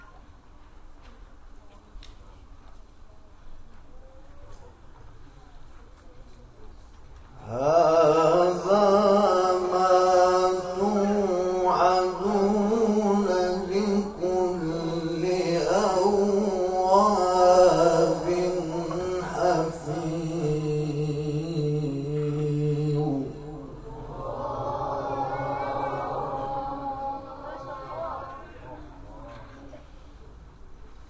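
Nothing stood out as a technical fault on listening.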